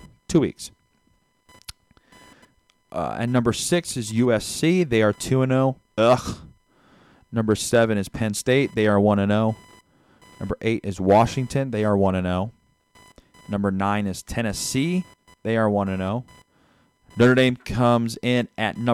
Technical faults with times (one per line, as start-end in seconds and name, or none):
0.00-18.93 computer activity noise